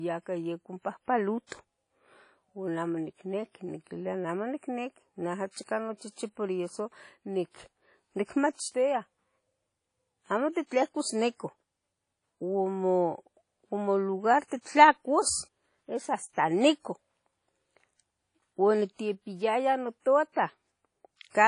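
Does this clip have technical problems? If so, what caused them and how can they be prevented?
Yes. Speech rings and sounds washy throughout. Its hiss rises and falls with the signal. Nothing sounds above 10.1 kHz. This is likely WMA compression, which fits about 32 kbps. Weak detail gets zeroed. Prevention: encode at a higher bitrate, or keep a lossless master.

Pre-echo appears from 1.47 to 1.52 s. A short hiss comes before a sharp attack. The codec spreads noise over the block, so about 50 ms before the onset fills with it. The attack sounds smeared. Prevention: use an encoder that switches to short blocks on transients.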